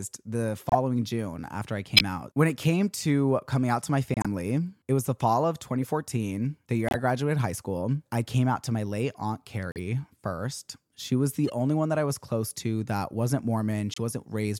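Corrupt frame decoded at 0.69, 1.97, 4.14 after "coming out to my", 5.82 after "was the fall of", 6.88, 9.72, 11.48 and 13.94 s after "close to that wasn't": damaged compressed frames played anyway, putting energy at wrong frequencies as brief chirps and bursts, some loud, some faint.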